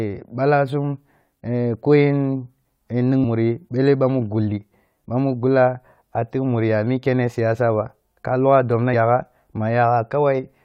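Compressed frames skipped at 8.93 s, right after "siyasa ba ka logha": about seven frames never reach the output, so the speech jumps ahead by roughly 150 ms, consistent with frames of 21.3 ms.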